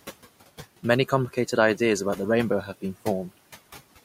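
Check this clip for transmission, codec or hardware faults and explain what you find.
One fault runs through the whole speech clip: noise suppressor artifacts.

Throughout, a suppressor cuts the steady room noise by about 17 dB frame by frame, so the noise sinks in pauses and swells under speech, unlike a gate's abrupt on-off switching.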